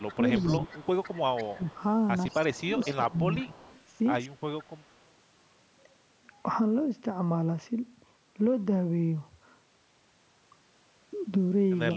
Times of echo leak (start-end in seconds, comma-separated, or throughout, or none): 0.00-1.64, 2.29-2.94, 3.56-3.81, 4.59-4.94